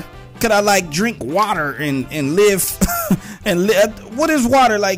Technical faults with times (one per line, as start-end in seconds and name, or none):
0.00-4.98 hard clipping